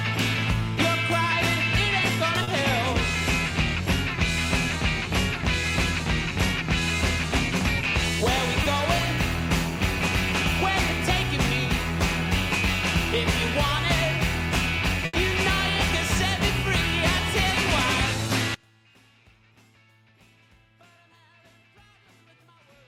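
At 2.43 s and again at 8.63 s, short concealed packet loss occurs. A packet never reached the decoder in time, and the receiver covered the hole by extending the sound just before it, then blending back into the real stream. The first gap, 2.43 to 2.49 s, covers 40 ms. The second, 8.63 to 8.67 s, covers 20 ms. Each passes as a brief smear or wobble, with that slice of the original sound gone.

From 15.05 to 15.15 s there is a burst of packet loss. Several consecutive packets, about 80 ms of audio in total, were lost or arrived too late to be played. Concealment stretched the last received sound and faded it as the gap went on, so the moment comes across as a held buzz or fading hiss. The sound then resumes further along, with the 80 ms in between simply missing.

At 18.54 s the level suddenly collapses by about 32 dB and stays down to the end of the clip at roughly 23 s. The likely cause is one channel inverted: one side of the stereo pair has reversed polarity, so when the channels are summed to mono, everything common to both cancels. 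What survives is only the faint difference between them, a residue of the sound.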